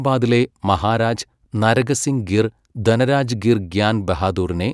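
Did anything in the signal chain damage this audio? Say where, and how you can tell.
No, nothing in the chain has left an audible mark on this speech recording at any stage.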